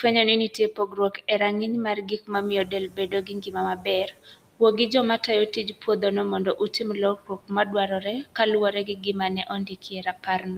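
A noise suppressor runs over the whole of this speech clip, pulling down every band it judges to be steady noise by about 19 dB, frame by frame. Those noise suppressor artifacts leave the background sinking in the gaps and swelling back up under the talking. Around 2.5 s the room noise jumps by about 25 dB, settling about 19 dB below the speech. The suppressor's noise estimate can't keep pace with that jump, and from 2.32 to 3.28 s it is catching up. For those 960 ms the reduction is only about 12 dB, so the louder background pushes through before it fades down as the estimate adapts. The suppressor also mistakes parts of the speech for noise and cuts them along with the background, by up to about 18 to 19 dB. This happens in bursts from 0.48 to 1.4 s (roughly 0.4 s of it in total), from 1.95 to 6.03 s (roughly 1.5 s), from 6.45 to 8.39 s (roughly 0.7 s), and again from 8.72 s to the end. 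In those stretches soft consonants, word endings and quieter phrases sound swallowed or faint, as if they drop out from under the talker.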